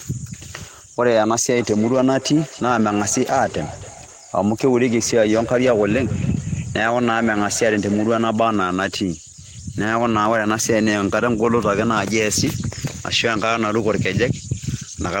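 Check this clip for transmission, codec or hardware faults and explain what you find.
There is one fault: feedback echo between two devices, from 1.55 to 8.39 s. A second device in the room replays the call, and this microphone picks it up again. Its echo canceller cannot remove that sound. The speech returns about every third of a second, thinner and ringing, peaking about 17 dB below the speech.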